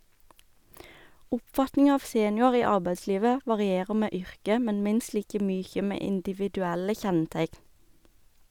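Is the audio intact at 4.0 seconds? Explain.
Yes, the speech at 4.0 seconds is intact, with no dropout, click, distortion or other fault audible at that moment.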